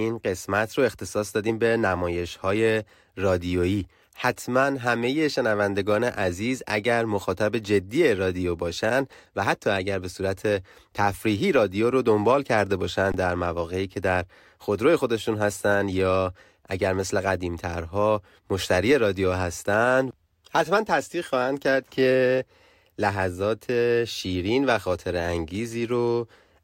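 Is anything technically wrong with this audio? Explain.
Yes. At 13.12 to 13.14 s there is an underrun with held sample. The output buffer ran dry for about 21 ms, which fits a 1024-sample buffer. The converter held its last value, so the waveform shows a flat line. Roughly 20 ms of speech is lost.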